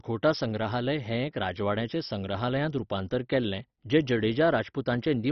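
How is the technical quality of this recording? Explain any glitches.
Technical quality is poor. Heavy MP2 compression damages the speech from start to finish. Nothing reaches above about 6.1 kHz, so the voice sounds dull and boxed in. The likely cause is MPEG Layer II coding at a very low rate, which fits roughly 32 kbps. With so few bits, the coder switches off the upper sub-bands entirely. The bands that remain are quantised coarsely and flicker on and off. That gives a gurgling, granular texture.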